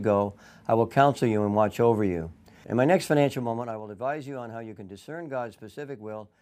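From 3.2 s to 3.84 s, a gain reduction in the speech is applied in unsmoothed 2 dB jumps rather than as a continuous ramp, lowering the level by roughly 15 dB at around ten steps a second. Each jump is an abrupt discontinuity in the waveform, so the fade carries zipper noise: a rapid train of small clicks that ticks and rasps over the voice until the level settles.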